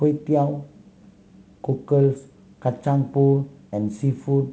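Nothing in this speech clip points to a technical fault. It carries G.722 wideband telephone coding at 48 kbit/s, which keeps content up to about 7 kHz with a faint hiss in the upper band and a slightly noisier lower band from its reduced bit allocation.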